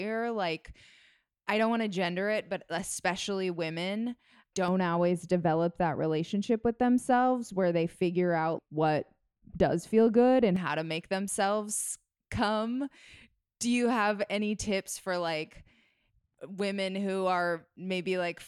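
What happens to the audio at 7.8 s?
At 7.8 s the speech sits inside a stretch of wrongly applied de-emphasis, running from about 4.68 s (after "it but especially women") to 10.56 s (before "how to make themselves"). A treble cut went onto audio that didn't need it, sloping down to about 11 dB lower at 10 kHz, so it sounds dull and muffled.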